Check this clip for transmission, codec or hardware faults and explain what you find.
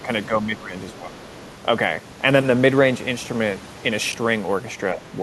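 There are three problems: a few stretches where the talker gets ducked, a brief scrap of a second voice bleeding in, and two small reordering glitches later on.

Speech suppressed in double talk shows up at 0.0–0.1, 0.28–0.71, 0.93–1.15 and 4.94–5.09 s. The talker's level sags by a few dB at the start and by roughly 10 dB in the later stretches, so the speech sounds pulled back. The likely cause is an echo canceller that heard both sides at once, couldn't tell the local talker from loudspeaker echo, and turned everything down.

The other side's voice leaking through appears at 1.21–1.5 s as a faint second voice under the talker, very low at about 30 dB below the main speech. It's likely loudspeaker playback of the far end getting picked up by the mic, with the echo canceller leaving a residue rather than stripping it out completely.

Chunks out of order happen at 3.25–3.28 and 4.12–4.14 s. 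Each one is a short jumbled moment where a bit of audio plays a moment after the material that should follow it. This fits 10 ms blocks being written late, about two blocks behind in the first case and one in the second. Nothing goes missing, but the hard joins on either side of the displaced block make the moment sound garbled.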